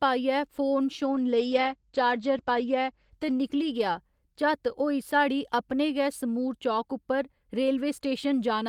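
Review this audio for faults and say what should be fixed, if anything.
A call bitrate drop runs from 1.07 to 4.69 s, between "पाइयै फोन" and "होई साढ़ी अपने गै". The top end falls from 20 kHz to 8 kHz. The speech sounds muffled and coarse, which fits a squeeze from about 40 to 13 kbps. Give the call steadier bandwidth, or set a higher minimum encoder bitrate.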